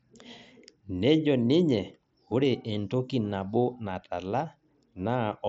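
Nothing stood out on listening to this speech recording.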